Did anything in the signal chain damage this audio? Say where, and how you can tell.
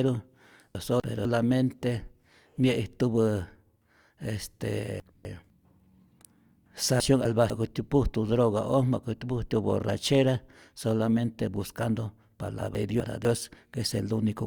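Yes: chunks out of order at 0.75–1.25, 5.0–5.5, 7.0–7.5 and 12.75–13.25 s, buffer stage. Each time, two 250 ms chunks swap places, jumbling the speech at three hard joins.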